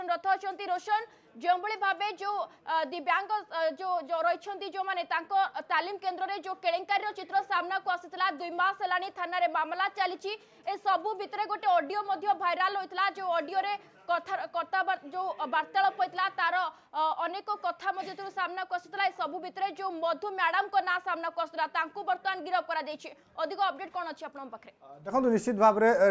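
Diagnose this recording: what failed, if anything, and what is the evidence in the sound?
Nothing in the recording stood out on listening as pointing to a failure at any stage of the chain.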